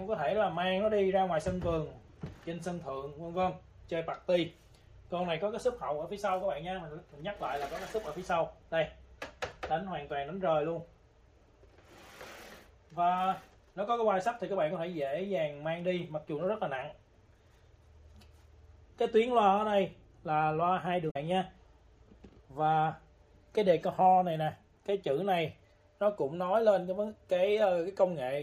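At 21.07 s, lasting about 0.1 s to 21.17 s, damaged data in the compressed stream breaks through as a short glitch. Corrupted bytes leave the decoder unable to read those frames, so it loses sync and hunts for the next valid frame header before playback resumes.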